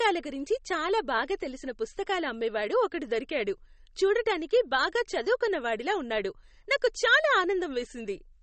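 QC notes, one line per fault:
Throughout, MP3 compression. Nothing sounds above 8.4 kHz, so s sounds in the speech are dull. Weak detail flickers in and out, giving a watery, swirly texture, and attacks smear. The likely cause is heavy MP3 encoding, which fits about 32 kbps.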